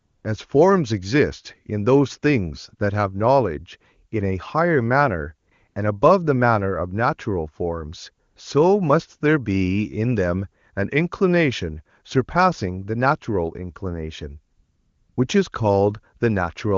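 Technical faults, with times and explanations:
0.00–0.23 s, 5.49–5.51 s, 5.67–5.75 s, 8.29–8.35 s, 14.57–15.17 s, AMR comfort noise: the background becomes a smooth, steady hiss that switches in and out. The phone judged these gaps silent, stopped sending speech frames, and the receiver filled them with synthetic noise.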